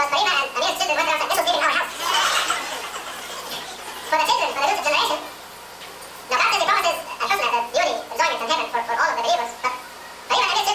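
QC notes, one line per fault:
throughout, wrong sample rate: the samples are being clocked out twice as fast as they were captured, with no conversion, which fits audio recorded at 16 kHz played back at 32 kHz. Everything runs at double speed and sits a full octave high, sounding hurried and chipmunk-like.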